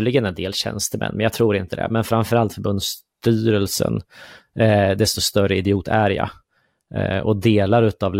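Clock slip clicks run from 0.16 s to the end of the speech, a fast train of tiny ticks about every 0.07 s that merges into a soft rattle under the louder, brighter sounds. The likely cause is two devices running on unsynchronised clocks that disagree by a few hundred parts per million. Each time that drift adds up to one whole sample, a sample is dropped or repeated, producing one of roughly 150 ticks.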